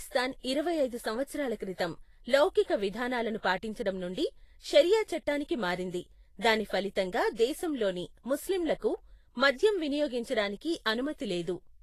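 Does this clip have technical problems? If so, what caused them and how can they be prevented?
Yes. Throughout the speech there is a hissy, grainy texture, with roughened tones and softened consonant attacks, and nothing is heard above about 14.2 kHz. This is likely Vorbis compression at a low bitrate, roughly 32 kbps. The encoder keeps a smooth spectral outline but quantises the treble so coarsely that fine detail turns into noise of similar energy. Unlike a simple low-pass filter, the remaining treble sounds noisy and granular rather than cleanly dulled. Encoding at a higher Vorbis quality setting, or keeping a lossless master, prevents it.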